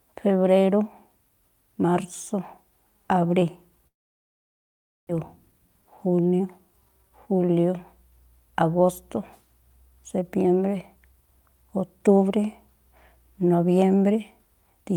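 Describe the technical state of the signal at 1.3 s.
At 1.3 s the speech signal is intact, with no audible fault at that moment.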